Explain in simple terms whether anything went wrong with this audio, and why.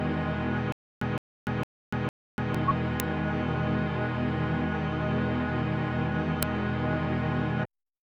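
A few things go wrong here. From 0.72 to 2.55 s there's a stutter with silent gaps: a short 165 ms burst plays, then about 290 ms of dead silence, repeating every 0.46 s, four times. The likely cause is playback stalling and replaying its last scrap, so the real audio from that stretch is lost.

At 3.00 s and again at 6.43 s you'll hear a short, loud crack. That's an uninitialised buffer: a block got played before any audio was written into it, so leftover memory came out as noise. The first fits a 64-sample block and the second a 128-sample one, each only a few milliseconds.

Right near the end, at 7.64 s, compressed frames are skipped. About a tenth of a second of audio simply isn't there, and the sound jumps ahead.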